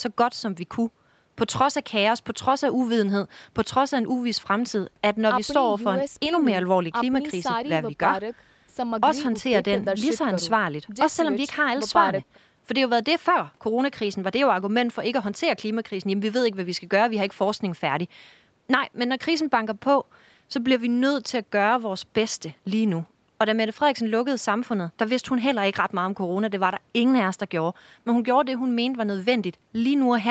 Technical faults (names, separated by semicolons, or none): none